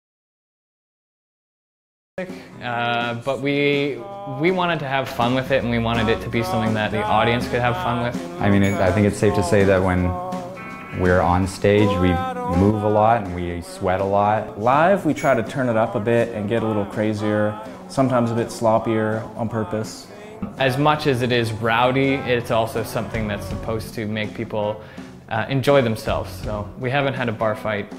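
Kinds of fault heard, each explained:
Audio dropout to silence: the clip opens already inside a gap of silence that lasts until about 2.18 s, after which the sound arrives abruptly in mid-flow rather than fading up. No room tone fills the gap, so the input was likely disconnected or muted while the recorder kept writing silence. On a waveform this is a flat line; on a spectrogram, a dark band with a hard vertical edge where sound resumes.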